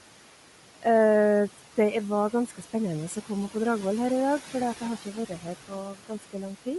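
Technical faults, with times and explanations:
Throughout: noise suppressor artifacts. The room noise, about 16 dB below the speech, sinks when the talking pauses and swells back up beneath each phrase. The suppressor estimates which frequency bands hold steady noise and turns those bands down, by about 12 dB here, frame by frame. Because it keeps switching between gaps and speech, the residue pumps instead of sitting as a constant bed.
Throughout: Bluetooth LC3 compression. The speech has a plainly audible grainy, breathy edge, and nothing is present above 11.5 kHz. The likely cause is the LC3 transform codec used in Bluetooth LE Audio. At a modest rate, which fits around 48 kbps with 10 ms frames, it discards much of the fine upper-spectrum detail and fills those regions with shaped noise. That substitution produces the grainy edge on the voice, and the limited band gives the hard ceiling on the top end.
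2.32–2.74 s, 5.02–5.46 s, 5.93–6.35 s: speech cut by the noise suppressor. In each stretch, parts of the speech go faint or sound swallowed, as if a consonant or word ending briefly drops away. The dips deepen over the clip, to about 7, 10 and 12 dB. Each affects roughly a tenth to a fifth of a second in total. The suppressor misjudged soft, noise-like speech energy as background and attenuated it along with the room noise.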